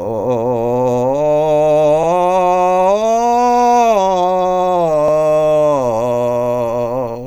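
At 2.03 to 2.08 s and again at 5.08 to 5.13 s the music stutters, a short skip-back heard as a click or hiccup. These are overlapping chunks: the audio was handled in 3-second blocks, and each block began 50 ms before the previous one ended, so that 50 ms slice plays twice at every join. The two stutters fall about 3.05 seconds apart, close to the chunk length.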